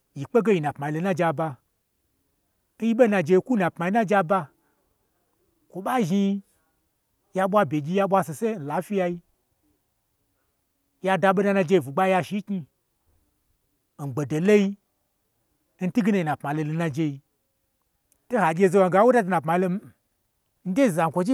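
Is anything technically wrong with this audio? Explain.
No, nothing technically wrong is audible anywhere in this speech recording.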